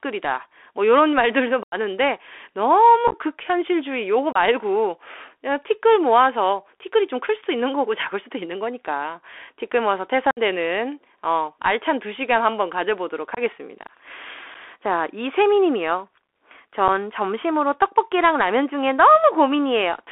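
The speech runs through a Bluetooth CVSD headset codec throughout. It passes only 300 Hz to 3.5 kHz. Its one-bit adaptive steps leave plainly audible granular hiss and scratchy s sounds.

Unconcealed Bluetooth headset packet loss cuts abrupt holes at 1.63–1.75, 3.08–3.17, 4.32–4.37, 10.31–10.39, 13.35–13.41, 14.54 and 16.88 s. The holes last 7.5 to 90 ms. Speech resumes briefly quieter.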